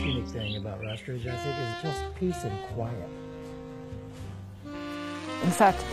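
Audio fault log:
0.00–4.43 s, adaptive stream starting at a low bitrate: nothing above 12.3 kHz and heavier codec smear, which fits an HE-AAC start near 16 kbit/s, then a sudden, gapless jump to cleaner AAC-LC.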